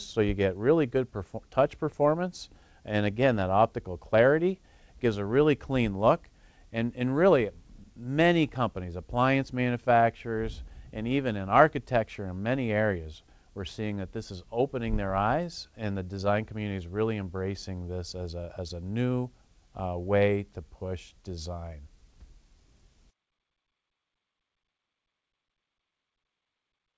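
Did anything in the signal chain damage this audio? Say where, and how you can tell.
No, nothing stood out on listening; the audio has come over a call path, with nothing above 8 kHz, which fits a wideband call codec such as G.722.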